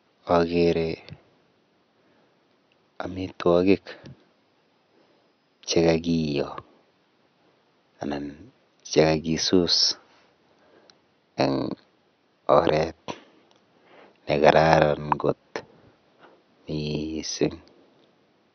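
No technical faults can be heard anywhere in this recording.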